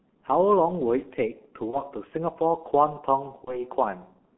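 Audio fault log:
throughout: G.723.1 codec. The speech sounds muffled and hoarse, with smeared consonants and nothing above 3.4 kHz or below 200 Hz. The coarse, heavy damage points to a low-rate telephony coder near 6.3 kbit/s, which models the voice only once per 30 ms frame.
1.70–1.82 s and 3.44–3.63 s: VoIP packet loss concealed by the speech codec. Each spot briefly turns into a buzzy tone or coloured noise that fades, then stays weak or distorted as the speech resumes. The pattern fits a single lost 30 ms frame, with the decoder extrapolating the previous pitch and filter and taking a while to recover.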